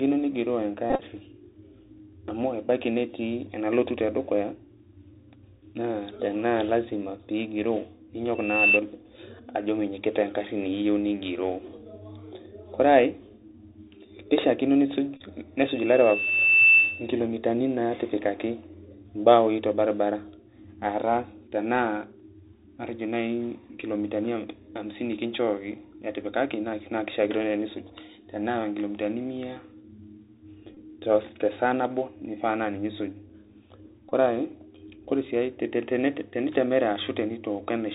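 Throughout, the speech carries plainly audible Bluetooth CVSD headset codec damage, which fits a 64 kbit/s link. Each sample is a one-bit up-or-down step of adaptive size, so a spectrogram shows a hard ceiling at 4 kHz. A granular hiss lies under everything, and s sounds turn scratchy.

At 0.90–1.03 s comes a Bluetooth headset packet repeated fault. About 60 ms of packets were lost across 90 ms, with the longest run roughly 30 ms, and each gap was filled by decoding the previous packet again. The result is a brief buzz near 267 Hz. On the waveform it shows as identical 3.75 ms segments tiled in a row.

At 8.35–8.79 s a loudspeaker feedback squeal appears. The microphone hears its own loudspeaker, and the loop gain at 2.7 kHz exceeds one, so a pure tone swells over about a third of a second to some 10 dB above the speech. A spectrogram shows one bright horizontal line.

Another short repeated-packet buzz follows at 15.17–15.21 s, lasting about 34 ms.

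A second feedback squeal at 2.7 kHz runs from 15.61 to 17.13 s. This one builds more slowly, over roughly a second, to the same level.

Two brief repeated-packet buzzes come at 30.75–30.77 s and 34.09–34.12 s. Each appears as a short stretch of repeated waveform.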